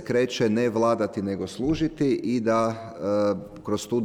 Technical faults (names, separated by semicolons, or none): none